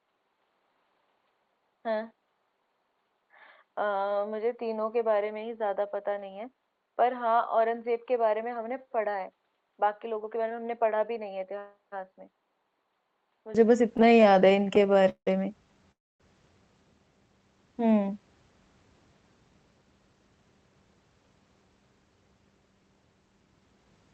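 Input switched to a poorer device, 0 to 13.55 s: the speech is dull and about 10 dB quieter, with a faint noise floor, likely from a narrower-band microphone.

Repeated stalls (stutter), 13.97 to 15.28 s: late packets emptied the jitter buffer about two dozen times, the longest wait 173 ms. Nearly a third of the stretch is filled-in sound, so speech drags and stutters.

Call audio freeze, 15.92 to 16.21 s: the speech halts for about 280 ms, nearly all of it silent, then resumes where it stopped, most likely because delayed packets emptied the jitter buffer.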